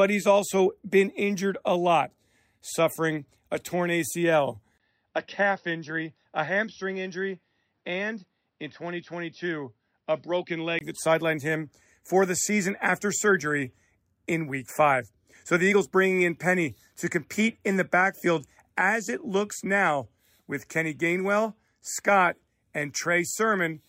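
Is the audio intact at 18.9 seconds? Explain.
Yes, at 18.9 seconds the speech is intact, with no dropout, glitch or other fault to be heard.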